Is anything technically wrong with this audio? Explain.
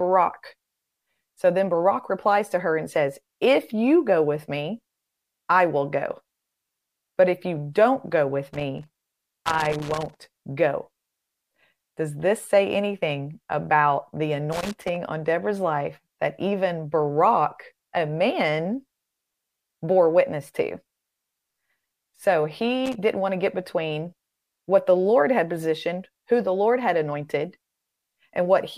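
Yes, this speech clip has loose connector crackle, three bursts of it. The first runs from 8.53 to 10.26 s, right after "you don't go with". A shorter one sits at 14.52 to 14.96 s after "say anything about the", and a quick blip hits at 22.86 to 22.95 s just before "didn't want to get". A dirty or worn contact is making and breaking as something shifts, chopping the signal and popping on any DC, so you get irregular scratchy crackle.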